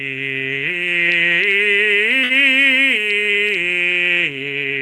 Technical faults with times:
2.23-2.33 short stall from a late packet

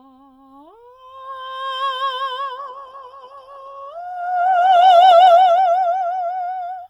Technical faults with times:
2.58-6.89 call bitrate drop

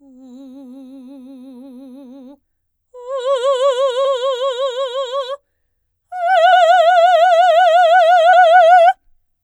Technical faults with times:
4.04 compressed frames skipped
6.52 compressed frames skipped
8.32 compressed frames skipped

